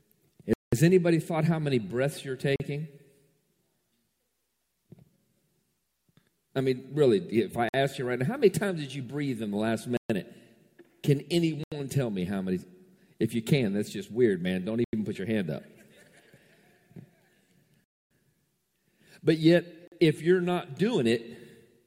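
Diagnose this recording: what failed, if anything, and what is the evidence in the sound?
The sound drops to dead silence and resumes at 0.53, 2.56, 7.69, 9.97, 11.64, 14.84, 17.84 and 19.88 s, for 40 to 270 ms. This is likely a Bluetooth stall at playback, where the headphone buffer ran dry awaiting resent packets.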